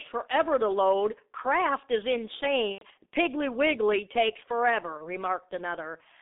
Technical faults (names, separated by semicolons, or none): G.723.1 codec; VoIP packet loss concealed by the speech codec